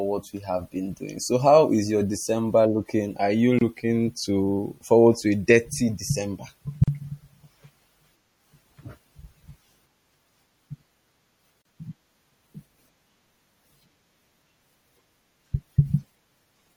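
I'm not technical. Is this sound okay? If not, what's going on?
No. The speech has a watery, swirly quality with dull treble and metallic edges on s sounds, most likely from MP3 compression squeezed too hard: the encoder drops fine high-frequency detail and lets weak parts flicker in and out.

There are also three brief dropouts, each a gap at a join of encoded pieces: at 3.59 to 3.61 s (about 26 ms, just before "looking to forward to"), 6.84 to 6.88 s (39 ms) and 11.62 to 11.65 s (35 ms). Separately encoded sections were stuck together untrimmed, so each join leaves a short hole of silence before the speech resumes.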